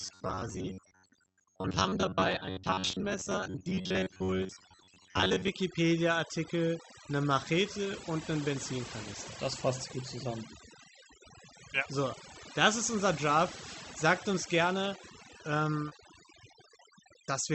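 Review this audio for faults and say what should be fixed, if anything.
Overdone noise removal runs throughout. The noise suppressor was set too aggressively, so it pulls individual frequency bands down or out whenever they sit near its noise estimate, taking the quieter parts of the speech with them. The background drops and breaks up into twinkling specks. Lowering the suppression depth, or using a gentler noise reduction mode, would prevent this.

Robotic sound from repeated short buffers covers 0.01 to 5.48 s. New audio likely arrived too seldom, so playback looped the most recent fragment of about 10.7 ms. About half the audio was repeats and the real material was skipped. The loop imposes a rigid 93.8 Hz metallic buzz that only loosely tracks the speech. Keeping the audio thread fed, for example with a larger buffer or higher scheduling priority, would prevent this.

Short concealed packet loss occurs from 15.89 to 15.93 s. 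About 20 ms of the Opus stream failed to reach the decoder in time, and concealment synthesised 18 ms by extending the preceding sound before crossfading back into the real audio. The result is a brief smear at that point. A larger jitter buffer or forward error correction would prevent this.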